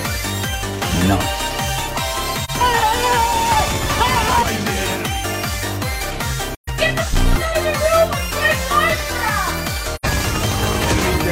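At 2.44 to 2.50 s, 6.55 to 6.68 s and 9.95 to 10.05 s, AAC frame loss with muting leaves a brief dip of about 43 ms and soft-edged holes of about 128 and 85 ms, which fit one, three and two missing frames. The decoder zeroed their spectrum, so overlapping windows fade the sound out and back in.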